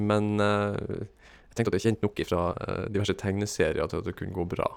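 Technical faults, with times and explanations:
1.18–3.10 s, time-stretched section: the speech abruptly runs 1.59 times faster while its pitch stays unchanged, so it sounds rushed until normal pace returns. The likely cause is software compressing this stretch to fit a shorter duration by dropping brief slices of audio.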